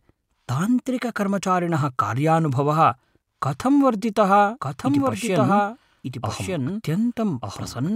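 A second, out-of-step copy of the audio enters this speech recording at 4.60 s and stays until the end, most likely because the signal is being picked up again through a slower path or an edit is holding two misaligned copies. The result is a doubled audio track: a full-band duplicate trailing roughly a second behind, about 5 dB quieter, cutting in abruptly with no decay or room colour.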